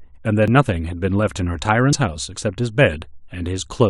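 Compressed frames get skipped at 0.45–0.49 s and 1.92 s; missing or rejected frames make the speech jump ahead about 50 ms.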